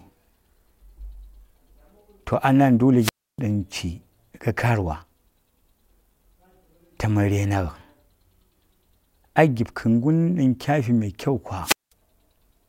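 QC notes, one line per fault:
2.99 to 3.40 s and 11.63 to 11.92 s, wireless microphone squelch dropout: the analogue FM radio link weakens until the receiver's squelch shuts the output off. A short rise of hiss or static comes first, then a hole of near silence lasting about 300 ms in the first event and about 200 ms in the second. Speech resumes once the signal recovers.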